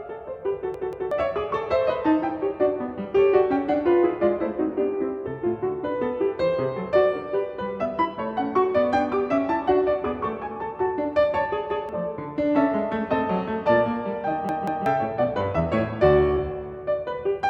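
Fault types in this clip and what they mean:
Repeated buffer: when fresh audio failed to arrive in time, the device replayed its last block, a slice of about 186 ms that fits an 8192-sample buffer. It sounds as a stutter with a hard seam at each join: twice extra at 0.74 s and 14.49 s, once at 11.70 s. Roughly 0.4 s or 0.2 s of material is lost. Unlike a dropout, nothing goes silent. Unlike an echo, each copy is identical and full level.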